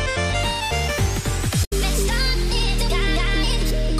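At 1.63 s the audio breaks into a short glitch lasting about 90 ms, ending at 1.73 s. This is damaged data in a compressed stream: a stretch of the encoded bytes was corrupted, so the decoder misread the affected frames, lost its frame alignment and had to hunt for the next valid header before normal output resumed. The result is a brief disruption in the decoded audio.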